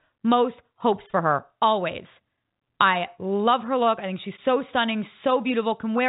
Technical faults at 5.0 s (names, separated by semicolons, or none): none